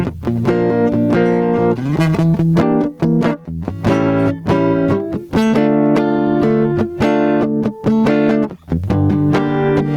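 Gain pumping runs through the whole of this music clip: the gain is pulled down by around 20 dB under each loud sound, likely from excessive input gain driving a fast limiter.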